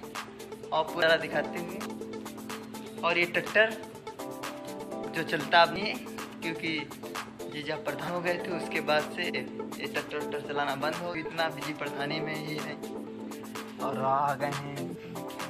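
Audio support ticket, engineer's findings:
Abrupt forward jumps, no silence, at 1.02, 1.86, 5.76, 8.08, 11.15 and 14.95 s, each skipping roughly 0.1 to 0.3 s. Likely dropped buffer (overrun): capture missed the read before hardware overwrote the samples, so the two sides are spliced directly.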